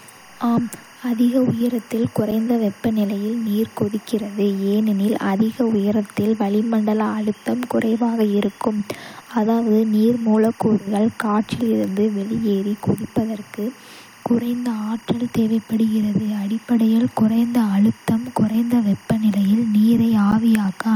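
Timecode bleed runs throughout the clip: a faint chirping warble about 30 dB below the speech, flipping between tones near 1 kHz and 2 kHz. This is 24-frames-per-second linear timecode, a square-wave signal, leaking in from an adjacent track or cable.

A gap between stream segments occurs at 2.31 s, between "ஆம் அதிக உயரத்தில்" and "வெப்பநிலையில் நீர் கொதிக்கிறது ஏனெனில்", and again at 20.32 s. Mismatched timestamps at segment joins leave holes of 7.8 ms and 11.7 ms that the player fills with hard-edged silence. The placement fits 2 s segments, and no audio is lost.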